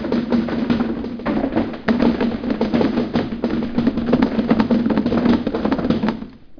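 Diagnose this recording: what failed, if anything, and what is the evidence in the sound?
Nothing in the signal chain points to a failure: the sounds in this recording come through continuous and intact, with no dropouts, glitches or distortion anywhere in the audio.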